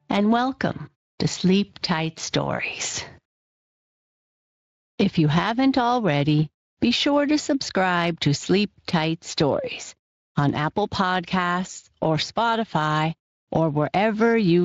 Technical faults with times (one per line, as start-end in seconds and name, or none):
0.00-14.64 gain pumping